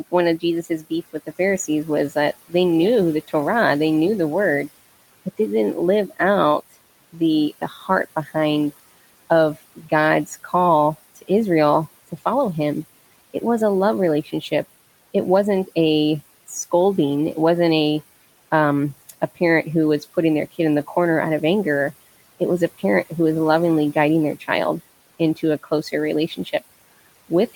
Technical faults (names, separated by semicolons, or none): speech cut by the noise suppressor